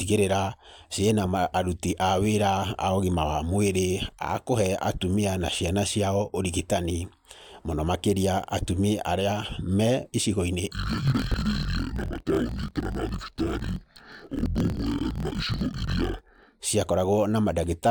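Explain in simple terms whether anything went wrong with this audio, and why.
From 10.7 to 16.6 s the speech drops an octave, sounding doubled and choppy. That's interleaved audio read as planar: 24 ms blocks were split wrongly. Unlike a simple slowdown, the pace stays normal.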